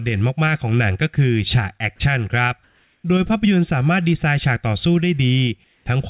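Between 2.64 and 3.04 s, and again from 5.64 to 5.86 s, the sender likely stopped transmitting during pauses and the receiver filled them with comfort noise in place of the background. The real background, about 44 and 41 dB below the loudest sound, gives way to a flat, featureless hiss about 2 dB quieter. From 5.84 to 5.86 s, the voice detector was likely slow to register returning sound, clipping the onset. The first 20 ms were lost to comfort noise, so the sound starts abruptly, already band-limited to 4 kHz by the call codec.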